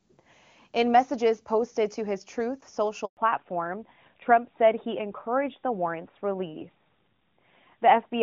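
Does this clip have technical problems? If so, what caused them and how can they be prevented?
Yes. A handover gap runs from 3.05 to 3.17 s: the sound cuts out for 120 ms as the call moves between networks and no speech frames arrive until the new link carries audio again. It can be prevented by improving coverage overlap so handovers complete without a break.

From 3.17 s to the end, a fallback to narrowband removes everything above 4 kHz, so the speech turns duller and rougher than the clear HD Voice before the gap. This fits a switch to AMR narrowband. Keeping HD Voice supported on both networks prevents it.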